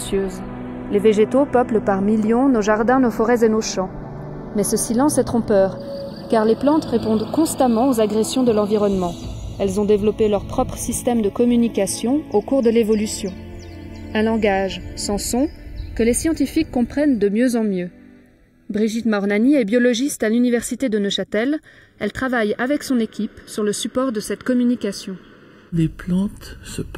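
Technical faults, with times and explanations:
Throughout, channels drifting apart: a roughly 20 ppm clock mismatch slides the inter-channel delay to about 0.7 ms, sweeping comb notches slowly, unlike a fixed offset.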